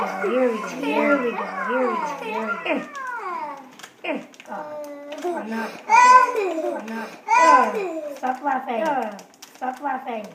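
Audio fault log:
Throughout: doubled audio track. A second full-band copy of the sound trails the original by roughly 1.5 seconds at around 5 dB lower, with no decay or room colouring. This is likely a slower second capture path or an edit holding two misaligned copies.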